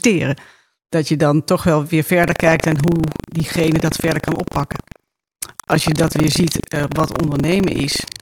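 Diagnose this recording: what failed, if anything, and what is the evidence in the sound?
The failure is buffer tearing at the driver or buffer stage. From 2.2 s to the end of the speech, a robotic rattle at 25 Hz rides on the sound, which fits a period of about 40 ms. The software writing the ring buffer and the hardware reading it have drifted until they cross inside each period. A small slice, roughly a tenth of every period, replays audio from around 150 ms earlier, with hard joins on both sides. On a waveform these show as step discontinuities every 40 ms. A spectrogram shows thin vertical broadband stripes at that spacing through the speech.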